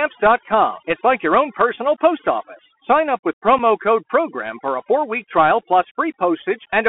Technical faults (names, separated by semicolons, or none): overdone noise removal; Bluetooth CVSD headset codec; unconcealed Bluetooth headset packet loss